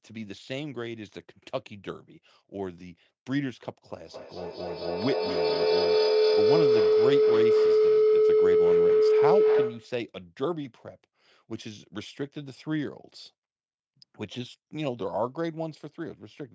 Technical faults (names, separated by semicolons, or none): feedback howl